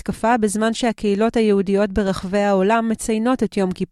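Nothing stood out as a fault on listening.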